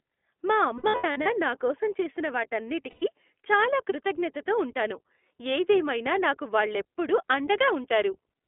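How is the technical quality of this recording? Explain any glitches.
The recording is narrowband and plainly coded throughout, with two short dropout glitches.

The iLBC codec runs throughout. The audio is confined to roughly 250 Hz to 3.5 kHz, and the speech has a rough, slightly synthetic texture. That texture fits the 15.2 kbps, 20 ms-frame mode, which codes each frame's excitation independently.

Lost iLBC frames occur from 0.78 to 1.28 s, just before "నా కోసం చేసిన". About 300 ms of audio is missing in scattered runs of up to about 70 ms. Again at 2.90 to 3.03 s, before "చాలా కృతజ్ఞతతో ఉంటాను ఏదేమైనా", about 120 ms is gone. The decoder fills each gap by repeating the last pitch cycle mixed with noise, so it sounds like a held, buzzy vowel. Because the frames are self-contained, the voice is right again almost at once afterwards.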